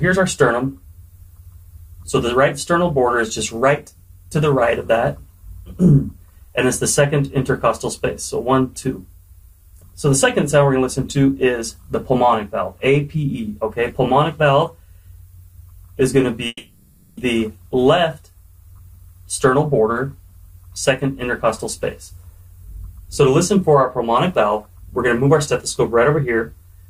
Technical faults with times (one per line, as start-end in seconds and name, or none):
16.47-17.19 long network dropout